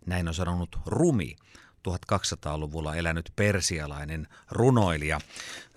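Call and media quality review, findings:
No technical faults were found in the speech signal on review.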